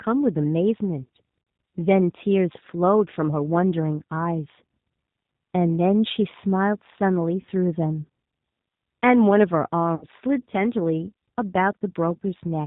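Throughout, the speech carries G.729 codec coding at 8 kbit/s, plainly audible: nothing above 4 kHz survives, and the voice sounds rough and faintly synthetic. Unlike simple low-pass filtering, that graininess comes from rebuilding each frame from a vocal tract filter and a few pulses.

VoIP packet loss concealed by the speech codec occurs at 1.43 s (about 40 ms missing, consistent with two packets), 7.41 s (20 ms, one packet) and 9.95 s (60 ms, three packets). Instead of a silent gap or click, the decoder stretches the last sound into a fading buzzy tone or coloured noise, and the voice stays weak briefly afterwards.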